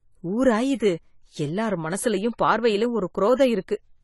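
Throughout, the speech sounds dull and smeared, with nothing above 11.5 kHz. This is likely AAC compression at a low bitrate, which fits roughly 32 kbps. At 0.75 to 0.80 s, a 49 ms hiss smears in before an attack. That is pre-echo: the block's quantisation noise fills the quiet gap. It recurs at 3.35 to 3.39 s, just after "எல்லார் மனசுலயும் பார்வையிலும்", spreading 42 ms.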